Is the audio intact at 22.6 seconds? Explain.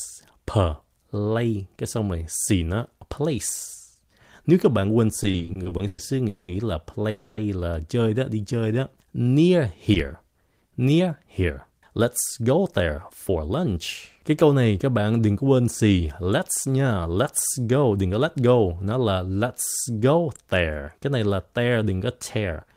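Yes, the speech at 22.6 seconds plays through intact, with no dropout, click, distortion or other fault at that point.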